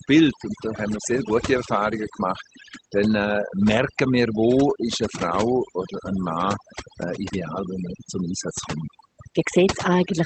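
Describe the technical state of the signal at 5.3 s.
At 5.3 s the speech carries overdone noise removal, which runs through the whole clip rather than arising at that moment. The noise reducer pushes individual frequency bands far down whenever they sit close to its noise estimate, taking the quieter parts of the speech with them. The background drops and breaks up into twinkling specks. Unlike low-bitrate codec smearing, the artefacts cluster in pauses and soft passages. The call path's limit near 8 kHz is normal for Opus at that bandwidth.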